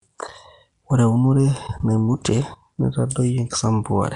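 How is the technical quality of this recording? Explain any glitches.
The quality is held back by plainly audible codec damage running the whole way through. The speech has a rough, hissy fringe around it and a smeared, underwater character, and nothing comes through above about 10.6 kHz. That's likely Nellymoser compression, the old Flash microphone codec, working at a rate that fits roughly 44 kbps. It codes short blocks of samples on a tight, fixed bit budget. Weaker bands get no bits at all and are filled in with noise, which is where the hiss and the smearing come from.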